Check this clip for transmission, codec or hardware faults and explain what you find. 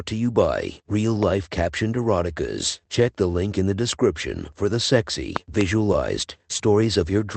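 The clip has two kinds of fault: loud pops in two places and one short concealed packet loss, heard through a call codec whose audio stops at about 8 kHz.

Loud pop: one at 1.23 to 1.25 s, about 10 dB above the speech, then a double pop from 5.36 to 5.63 s, just after "the description for the", peaking about 20 dB above it. A sudden voltage step, likely from a plug, switch or static discharge, was added to the signal and shaped by the downstream circuitry. Each is heard as a sharp thump over continuing speech. On a waveform they are tall spikes; on a spectrogram, bright vertical broadband lines.

Short concealed packet loss: at 6.57 to 6.61 s, about 20 ms of the call arrived too late to decode. The receiver filled the gap by extending the preceding sound and then blended back into real audio. It is heard as a brief smear or wobble in the speech.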